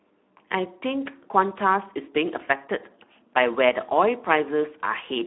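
From start to finish, the speech carries Speex codec damage, and it is plainly audible. The sound is hoarse and grainy, with a noisy, buzzy edge on voiced parts. This CELP codec is short of bits for the excitation signal, so fine detail gets replaced by coarse approximations. The roughness fits a setting of around 11 kbps. The band runs from about 200 Hz to 3.6 kHz, and nothing sits above 3.8 kHz, giving a narrow telephone-like tone.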